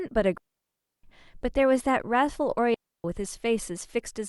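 Digital wireless dropouts at 0.38 to 1.04 s and 2.74 to 3.04 s: the receiver lost too much data and muted with a quick fade, leaving clean near-silent holes of about 660 ms and 300 ms in the speech, with no noise burst either side.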